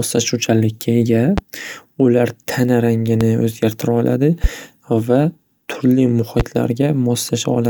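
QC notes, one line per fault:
1.38–1.41, 3.21–3.24, 4.44–4.47 and 6.40–6.43 s, loud pop: four single sharp pops, each roughly 30 ms long and peaking about 15 dB above the speech, which carries on underneath. The likely cause is a sudden voltage step or pulse from a plug, switch, static or driver glitch, shaped by the downstream circuitry. On a waveform, each is a tall isolated spike; on a spectrogram, a thin full-bandwidth vertical stripe.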